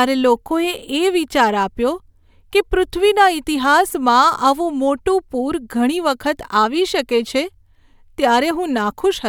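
No audible faults anywhere in the speech.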